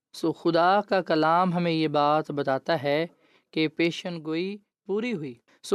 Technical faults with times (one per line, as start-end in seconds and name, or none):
4.01-5.35 one channel drops out